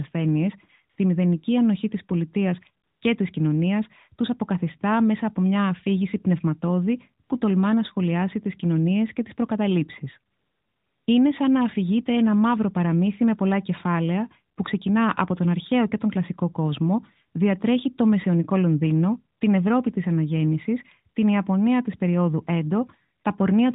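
The phone's voice activity detection judged the talker silent and stopped sending speech frames, so the receiver filled those gaps with AMR comfort noise, a synthetic hiss built from a rough level and spectrum estimate. This happens at 0.90–0.98, 2.84–3.02, 7.24–7.30, 10.32–11.08, 14.56–14.58, 19.38–19.40 and 23.20–23.24 s. The real background gives way to a smooth, steady noise that switches in and out, including during the 760 ms stretch near 10.3 s. The surrounding narrowband speech is band-limited below 4 kHz with only light coding damage, which fits the 12.2 kbps AMR-NB mode.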